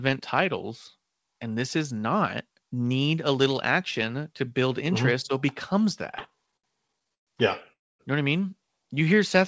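From 6.12 to 7.29 s the speech breaks into repeated stalls (stutter): thirteen short gaps where the receiver ran out of audio and kept extending the last sound until more arrived. About 313 ms is filled this way, roughly a quarter of that stretch, with the longest hold lasting 123 ms. Nothing is lost, but the delivery drags and hiccups. On a spectrogram the formant bands smear flat into brief repeated slabs, and the waveform shows small plateaus where its envelope stops evolving.

At 7.73 to 8.01 s comes a call audio freeze. The sound stops moving forward for about 265 ms: a short continuation of the last sound fades, and then about 240 ms of silence follows before the speech resumes exactly where it left off. This is likely packets held up in transit, with the receiver's playout delay growing by the same amount. A spectrogram shows an abrupt blank column after a fading tail, and the waveform shows a flat gap.

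From 9.05 to 9.41 s a jitter buffer slow-down stretches the audio by about 37 ms, so it plays at roughly 92% speed with its pitch unchanged. The receiver repeated single pitch periods to rebuild its reserve, drawing the sounds out slightly. The spectrogram shows harmonics that run a little longer than they should, and the waveform repeats near-identical cycles. Throughout the clip, nothing appears above 8 kHz, which fits a G.722 wideband call path.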